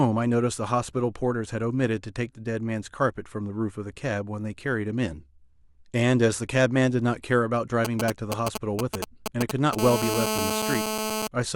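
From 7.85 to 9.75 s come GSM signalling bursts: a nearby 2G handset sends brief clusters of radio pulses, and the audio circuitry rectifies them into a galloping dit-dit-dit of short buzzes roughly as loud as the speech. A spectrogram shows broken vertical stacks of harmonics on a 217 Hz spacing.

From 9.79 to 11.27 s the phone enters a call and the pattern becomes a continuous GSM phone buzz. The 217 Hz burst rate is rectified into a hard, raspy tone about 2 dB below the speech, unrelated to it. The waveform carries a steady comb of spikes, and a spectrogram shows unbroken harmonic lines.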